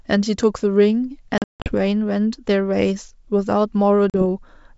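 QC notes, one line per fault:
1.38–1.75 s, packet loss on an ADPCM call: hard-edged gaps of silence scattered across about 280 ms, 240 ms missing in all, the longest run 160 ms. Sound resumes slightly distorted while the decoder's adaptive predictor and step size, thrown out of step by roughly ten missing packets, drift back into step with the sender's.
4.10–4.23 s, packet loss on an ADPCM call: a shorter 40 ms dropout, likely a couple of packets, with the same quick settling.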